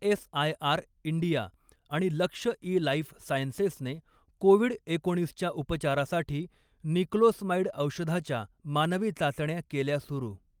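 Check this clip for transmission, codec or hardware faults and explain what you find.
Nothing in the speech points to a transmission, codec or hardware problem.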